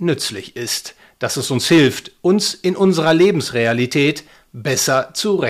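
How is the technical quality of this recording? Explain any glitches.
Hard clipping hits this speech three times: just after "es uns" from 1.71 to 1.87 s (about 5 dB over), from 2.82 to 4.09 s (about 7 dB), and 4.79 to 4.99 s (about 2 dB). The level exceeds what the signal path can carry, so peaks get sliced flat, and those flat tops add high harmonics you hear as harsh crackly fuzz.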